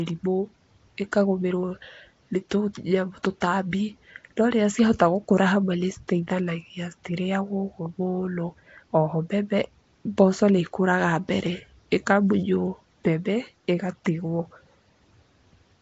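From the first moment to the last, the speech carries a rough, hissy halo and a smeared, underwater quality, and nothing comes through above about 7.7 kHz. That's most likely Nellymoser compression, the old Flash microphone codec, and the damage is plainly audible. It codes short blocks with very few bits, so weaker bands get dropped and refilled with noise, which is where that fizzy smear comes from. The overall coarseness fits a rate of around 32 kbps.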